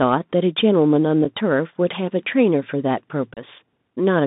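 From the first syllable to the end, the speech carries the signature of the Bluetooth CVSD headset codec. The sound is squeezed into a telephone band of about 150 Hz to 3.7 kHz, consistent with a 64 kbps one-bit delta modulator whose adaptive step cannot follow fast, loud, high-frequency movement. The damage is plainly audible: sibilants turn scratchy, and a grainy hiss sits beneath the speech. On a spectrogram, energy stops abruptly near 3.7 kHz. Fine broadband speckle fills the gaps between harmonics, and the waveform looks slightly stepped.

At 1.25 s, unconcealed Bluetooth headset packet loss cuts a 7.5 ms hole, about one packet's worth. Nothing fills it, so it lands as a brief hole with hard edges, and the level dips for a moment as the CVSD step size rebuilds. The waveform shows a flat notch, and the spectrogram shows a thin vertical gap.

From 3.34 to 3.39 s, the same fault returns at greater length. 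About four packets are lost, leaving a 30 ms silence. Both edges are abrupt, and the speech resumes quieter before recovering. This appears as a clear dropout to near silence in the waveform and a blank vertical stripe across all frequencies in the spectrogram.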